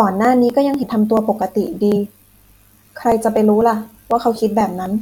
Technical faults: periodic USB or driver dropouts; compressed frames skipped

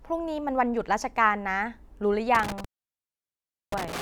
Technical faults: intermittent contact

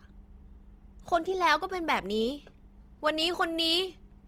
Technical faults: Opus compression

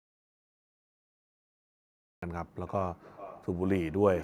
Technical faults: audio dropout to silence; feedback echo between two devices

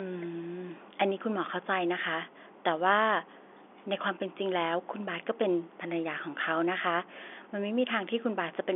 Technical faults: none

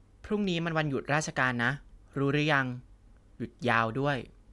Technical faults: none

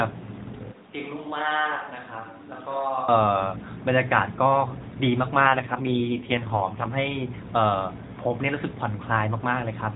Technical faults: AMR rate drop

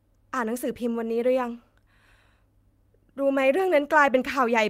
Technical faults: lost packet rebuilt from error correction

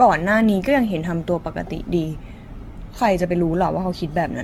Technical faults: generation loss

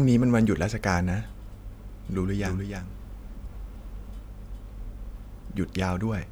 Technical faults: doubled audio track

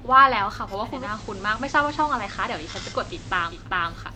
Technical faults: digital radio blending to analogue

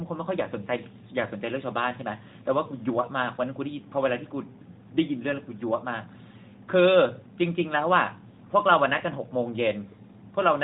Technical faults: none

